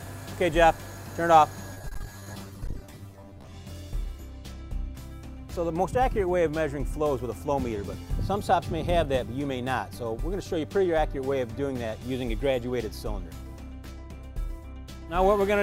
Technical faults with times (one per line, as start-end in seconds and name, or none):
1.74-3.52 repeated packet loss (robotic sound)